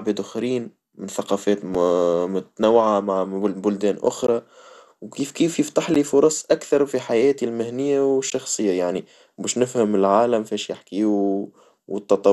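Throughout, the speech sounds dull and gurgling, with nothing above 12.2 kHz, likely from MP2 compression at a low bitrate around 80 kbps starving the upper sub-bands. Brief hard dropouts, each a block of digital silence, fall at 1.75 s between "آخرين من ثقافات" and "متنوعة من بلدان", at 4.27 s after "متنوعة من بلدان", at 5.94 s (a 12 ms gap heard as a tick, which fits a 512-sample buffer not filled in time), and at 8.30 s after "أكثر في حياتي المهنية".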